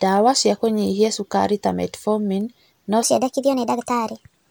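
A single sharp tick at 0.66 s, just before "cukari ta", and another at 2.41 s are bit error spikes: one flipped bit briefly throws a single sample off by a power of two. From 3.03 s to the end, the speech turns hurried and high, roughly four semitones up, a section at the wrong speed, likely played back 1.28 times too fast against a mismatched clock.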